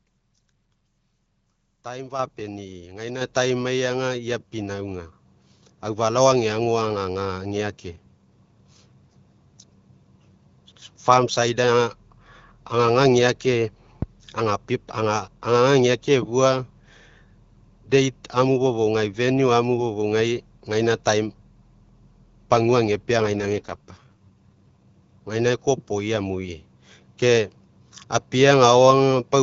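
At 2.19 s and again at 3.21 s the microphone volume is stepped up, each time by about 6 dB. Call software judged the input too quiet and raised the device's gain in one jump, so speech and background noise grow louder together. On a waveform the envelope widens abruptly at each point; on a spectrogram every band, including the noise floor between syllables, brightens at once along a vertical edge.

A phantom power thump arrives at 14.02 s and another at 20.20 s. A supply being switched on a live input sends a voltage step through the coupling capacitors, heard as a deep, dull knock that dies away over roughly 0.1 s, about 95 ms and 103 ms here, with the tails lasting to about 14.44 s and 20.66 s. A waveform shows a large, slow, one-sided swing decaying back to centre; a spectrogram shows a dark blob hugging the lowest frequencies.

From 23.18 to 24.83 s there is an AMR rate drop. The wideband AMR coding, which elsewhere carries speech clearly with only light codec colouring, falls to a lower mode, which fits a switch from 12.65 to 6.6 kbit/s. 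The voice turns raspy and synthetic with no gap and no loss of bandwidth. A spectrogram still reaches about 7 kHz, but harmonics become smeared and noisier until the higher rate returns.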